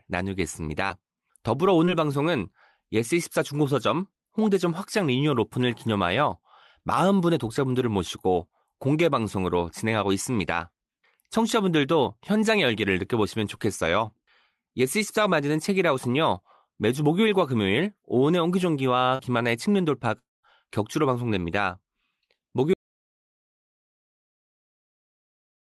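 Speech carried over a call path, band-limited at about 12 kHz with coding noise consistent with Opus at around 32 kbps. Short concealed packet loss occurs at 0.87–0.91 s, 1.85–1.89 s and 19.15–19.21 s: roughly 20, 20 and 40 ms of audio failed to arrive, and the decoder bridged each gap by extending the preceding sound, leaving brief smears. From 20.19 to 20.45 s there is a long network dropout, likely caused by about 240 ms of missing packets. The concealment fades out, leaving about 180 ms of silence before the audio resumes without the missing portion. At 22.74 s the sound cuts out completely into silence with no room tone, and it stays silent to the end, an audio dropout to silence that points to the input being lost while silence continued to be written.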